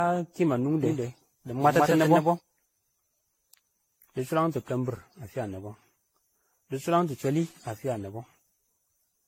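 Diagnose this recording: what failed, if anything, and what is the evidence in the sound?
Codec stage: generation loss. It runs through the whole speech clip. The sound is swirly, smeared and hollow, with blurred attacks. Nothing reaches above 16.5 kHz. This likely comes from around ten AAC-LC encode passes. Each pass requantises on a shifted frame grid, so errors accumulate.

Capture or editing stage: doubled audio track. From 0.83 s to 2.39 s, a second full-band copy trails by roughly 150 ms at about equal level. It has no decay or room colour and starts and stops abruptly. This is likely a second, slower capture path.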